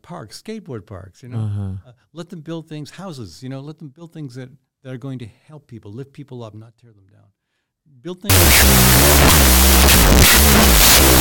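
Wrong sample width from 8.30 s to the end: 16-bit samples are apparently read as unsigned 8-bit bytes, burying the speech in loud noise at half speed and an octave lower.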